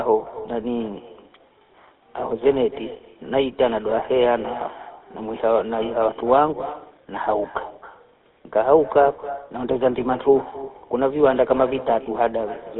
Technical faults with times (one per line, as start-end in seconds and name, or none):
0.00-12.79 echo with no canceller
0.00-12.79 GSM full-rate codec